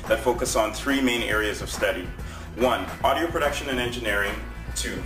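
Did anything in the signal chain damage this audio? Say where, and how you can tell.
Yes. The damage happened at sample-rate conversion, throughout the clip. A gritty, inharmonic fizz rides on the louder and brighter parts, roughly 20 dB below the sound. This is crude rate conversion. It fits a 32 kHz to 44.1 kHz step that repeated the nearest samples without filtering.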